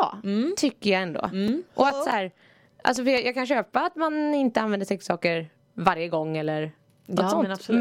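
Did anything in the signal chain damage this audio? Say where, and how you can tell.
Yes: CD scratch ticks at playback, 14 ticks from 0.63 to 3.39 s, about five per second. A disc blemish defeats error correction once per revolution, and the player masks the damage for up to roughly 5 ms.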